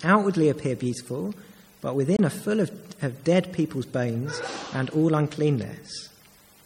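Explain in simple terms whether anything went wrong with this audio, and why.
Something did go wrong, briefly. From about 2.16 to 2.19 s the sound cuts out completely, a gap of roughly 23 ms, then picks up again as though it had kept playing underneath. That sharp little hole is a Bluetooth dropout. The likely cause is that a chunk of audio didn't reach the headphones in time and got thrown away, and a gap this short fits a single lost packet.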